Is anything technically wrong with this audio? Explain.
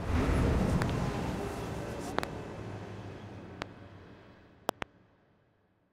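Yes. Loud pops occur at 0.82 to 0.92 s, 2.19 to 2.26 s, 3.62 to 3.64 s and 4.69 to 4.84 s. A single pop comes at 3.62 s, and each of the others is a quick pair. These are likely voltage spikes from a plug, switch, static discharge or driver glitch. The later circuitry shapes each spike into a sharp thump that rises about 20 to 25 dB above the sound, which carries on underneath.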